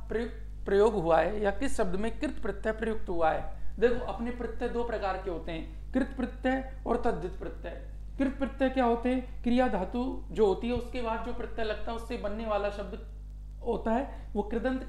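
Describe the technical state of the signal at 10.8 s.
A single loud pop sits on the signal from 10.76 to 10.79 s. It is a sharp click-thump peaking about 5 dB above the surrounding sound, which carries on underneath. The likely cause is a brief voltage step or spike, such as a switch or static discharge.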